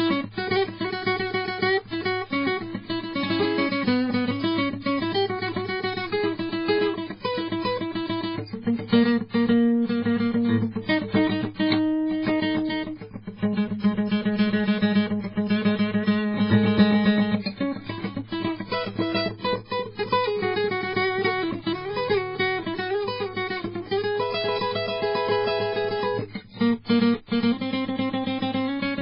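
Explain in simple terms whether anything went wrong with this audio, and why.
Yes. Throughout the music, everything above about 5.3 kHz is missing and the remaining sound is watery and swirly, with metallic chirps and smeared attacks. That points to heavy MP3 compression as the likely cause. A plain treble cut would sound dull but not swirl.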